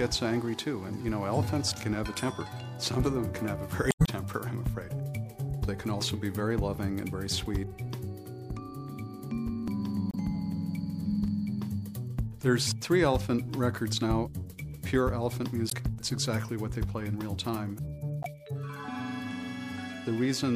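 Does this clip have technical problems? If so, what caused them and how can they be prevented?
Yes. Four short disruptions point to damaged data in a compressed stream, at 3.88 to 4.09 s, 10.08 to 10.15 s, 15.67 to 15.73 s and 18.22 to 18.26 s. At each one, bytes in the encoded stream were lost, zeroed, overwritten or mixed with foreign data, so the decoder misread or rejected those frames and lost sync until it found the next valid frame header. Preventing it means using checksummed, reliable storage and transport with error-checked transfers.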